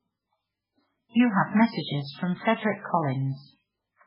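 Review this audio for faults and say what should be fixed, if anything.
Throughout, the speech stops at 5.2 kHz and sounds heavily watery and swirly. This points to bit-starved MP3 compression, likely near 8 kbps. Re-encode from the original source at a much higher bitrate.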